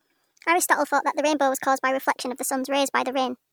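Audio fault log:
throughout: wrong sample rate; speech runs 1.38 times fast and 5.55 semitones high, which fits 32 kHz audio played at 44.1 kHz; spectrogram harmonics sit higher, squeezed in time.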